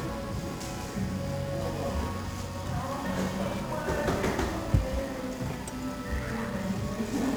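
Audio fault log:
throughout, 1-bit DFPWM compression: a dense fuzzy crackle rides on every sound, and the treble disappears under heavy hiss. Each sample keeps only an up-or-down decision that nudges an adaptive level, so the signal is rebuilt as a jittery staircase and the error spreads as strong broadband noise. The damage is heavy, which fits a rate near 48 kbps. A spectrogram shows a raised noise floor across all frequencies, and the waveform looks grainy and stepped.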